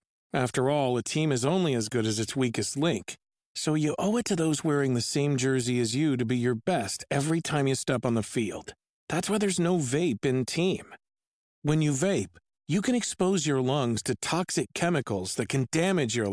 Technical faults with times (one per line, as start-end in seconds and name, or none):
none